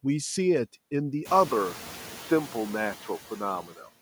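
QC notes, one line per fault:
throughout: noise suppressor artifacts. The suppressor pulls down bands it judges to be steady noise by only about 3 dB, so the background dips slightly between phrases and lifts under the speech.
1.48 s to end: input switched to a poorer device, likely a change to another microphone or headset profile. After a 20 ms silence at 1.48 s, the band narrows and the sound turns dull and boxy, with its own low noise floor and no jump in level. Because the band limit holds steadily from there on, it is not suppressor pumping.
3.67 to 3.89 s: speech cut by the noise suppressor. Within this stretch, roughly a tenth of a second of quiet speech drops by up to about 9 dB, so it sounds swallowed. It is brief and tied to soft speech, unlike the lasting change in the band.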